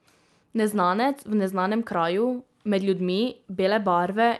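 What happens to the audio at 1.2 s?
At 1.2 s the speech comes through intact, carried by the WebRTC call path with its Opus coding and band limit around 12 kHz, and no fault occurs at that moment.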